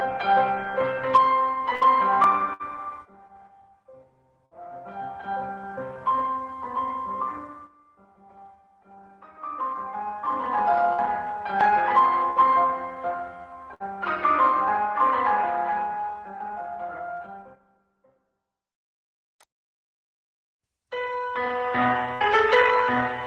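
Seven short dropouts, at 1.75, 2.53, 4.46, 10.93, 12.30, 13.74 and 22.14 s, each sound like a brief held buzz or fading hiss lasting roughly 53 to 62 ms before the audio jumps ahead, with about 60 ms of material missing each time. These are bursts of packet loss on the call path. The receiver stretched and faded the last decoded sound to cover each gap, then resumed further on. The Opus coding's top end stops near 12 kHz.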